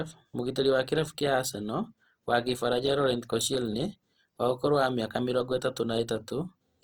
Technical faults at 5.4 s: Opus compression

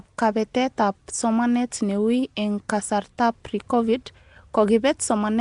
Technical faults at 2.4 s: Nellymoser compression

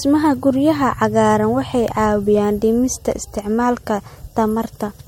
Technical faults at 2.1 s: generation loss

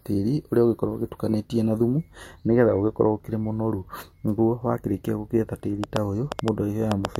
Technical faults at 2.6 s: none

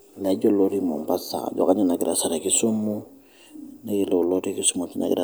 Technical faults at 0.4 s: none

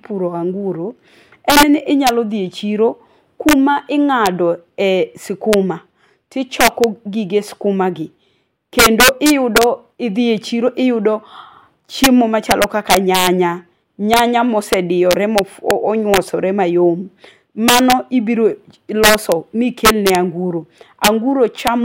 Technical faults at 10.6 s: integer overflow

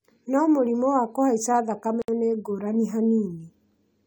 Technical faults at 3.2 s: none

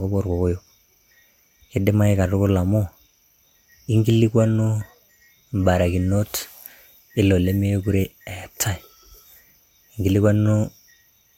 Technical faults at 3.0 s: none

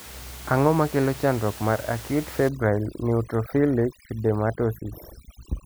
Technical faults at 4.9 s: overdone noise removal

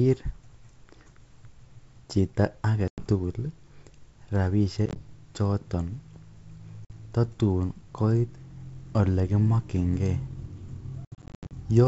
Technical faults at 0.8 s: none

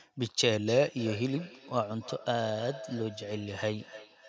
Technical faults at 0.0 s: none

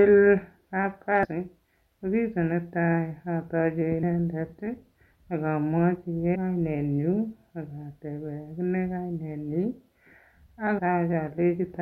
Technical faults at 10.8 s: damaged data in a compressed stream

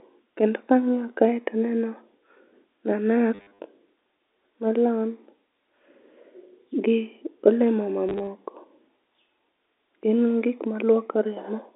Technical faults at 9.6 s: none

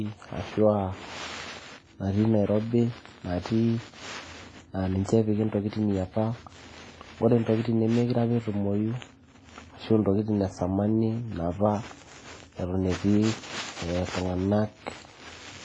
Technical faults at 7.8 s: WMA compression

